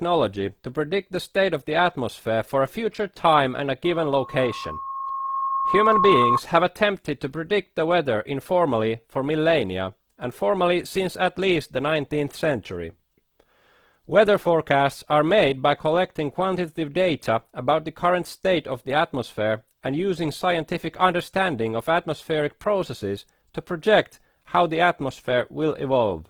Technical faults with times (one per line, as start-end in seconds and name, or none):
0.00-26.30 Opus compression
3.84-6.41 loudspeaker feedback squeal